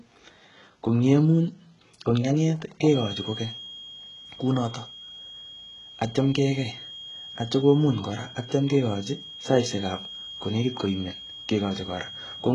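Right from the start the speech has that gritty, lispy treble of heavy HE-AAC compression, likely from a very low bitrate around 12 kbps, with rebuilt highs and nothing above 11.1 kHz. From 2.81 s to the end a thin, steady feedback whistle at 3.3 kHz sits roughly 20 dB under the speech, swelling and fading slowly, likely from a speaker-to-mic loop hovering right at the edge of feedback.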